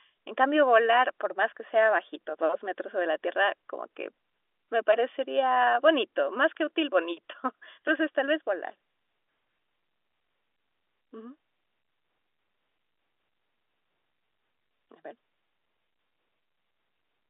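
Nothing's technically wrong with this speech clip: it's ordinary telephone-coded audio, G.711 A-law at 64 kbps, with the band topping out around 3.7 kHz as a phone line would.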